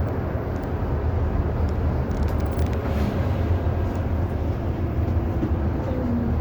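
Generation loss runs throughout this recording of everyday sound: it is swirly, smeared and hollow, attacks are blurred, and nothing remains above 19.4 kHz. This is likely from about three successive Vorbis encodes near 70 kbit/s, each requantising on a shifted frame grid.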